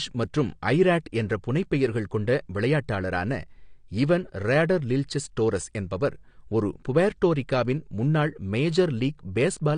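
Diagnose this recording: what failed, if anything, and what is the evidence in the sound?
The failure sits at the codec stage, and it runs the whole way through this speech. There's nothing at all above about 9.8 kHz, so the top end is just gone, and the sibilants come out smeared and a bit fizzy, with a watery warble on held sounds. That's the signature of likely AAC compression: the encoder is starving for bits, drops the high band, and coarsely quantises what's left. The damage is obvious enough to point to something around 32 kbps.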